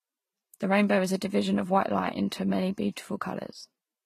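From start to finish, the speech is band-limited, with nothing above 15 kHz, and carries two layers of coding damage at once: a smeared, swirly texture typical of low-rate HE-AAC, and a separate grainy, warbling coarseness. This is likely transcoding between lossy codecs, with a very low-rate HE-AAC pass followed by a Vorbis pass at a moderate rate. A single codec would leave one consistent signature, but here the second encoder spends its bits preserving the first one's artefacts while adding its own.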